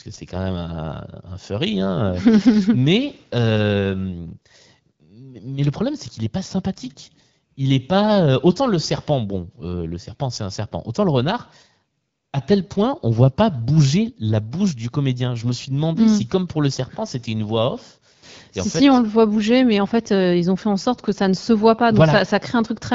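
Nothing stood out on listening to this speech, which is carried over the AMR wideband (HD Voice) codec at 12.65 kbit/s, with nothing above 7.5 kHz.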